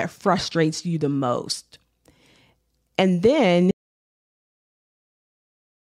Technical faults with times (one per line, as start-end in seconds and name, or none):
3.71-5.89 audio dropout to silence